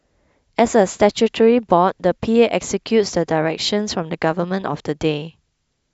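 No technical faults can be heard anywhere in this speech recording. There is nothing in the audio that calls for a timestamp or an explanation.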